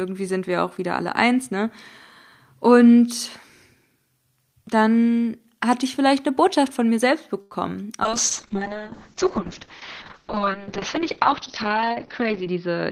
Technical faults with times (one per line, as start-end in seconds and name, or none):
7.41-7.53 short stall from a late packet
8.05-12.91 call bitrate drop
12.22-12.83 jitter buffer speed-up